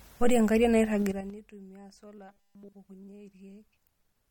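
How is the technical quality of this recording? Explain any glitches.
The recording has three audible faults: codec damage throughout, a zippered level drop, and a robotic stretch.

Throughout, the speech sounds watery and swirly, with nothing above 17.3 kHz. This is likely MP3 compression, and the damage suggests a low bitrate near 48 kbps.

From 1.02 to 1.39 s there is zipper noise. The level falls about 25 dB in coarse 6 dB steps, around ten a second, and each step ticks.

From 2.29 to 2.73 s the speech becomes a rigid, metallic 200 Hz buzz. This is likely robotic sound from repeated short buffers, with 5 ms chunks repeated.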